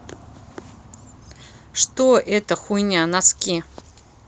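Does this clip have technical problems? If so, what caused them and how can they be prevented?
No technical faults are audible.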